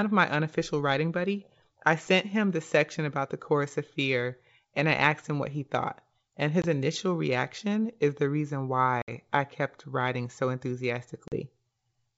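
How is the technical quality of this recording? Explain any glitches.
Three short dropouts break up the speech; the wideband G.722 sound itself stays clear up to about 7 kHz, consistent with its full 64 kbit/s mode.

The glitches are packet loss on an ADPCM call. At 6.62 s, just before "initial reaction is the", a 20 ms hard-edged silence of about one packet interrupts the speech. At 9.02 s, between "reaction is the reason" and "I kept writing so", 60 ms of audio (a few packets) drops out. At 11.28 s, 40 ms goes missing. Each time, lost packets were replaced with silence, leaving the decoder's adaptive predictor and step size out of step with the sender's. The speech comes back slightly distorted until the decoder resynchronises within a few tens of milliseconds.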